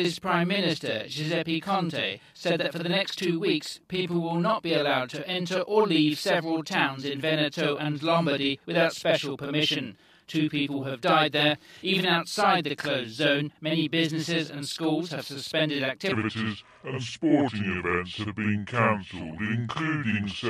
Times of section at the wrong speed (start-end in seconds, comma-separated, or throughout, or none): 16.12-20.49